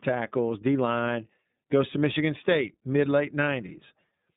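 iLBC codec throughout this speech clip: the band stops near 3.8 kHz, and independently coded 30 ms frames leave the speech plainly rough and synthetic, which fits 13.33 kbps.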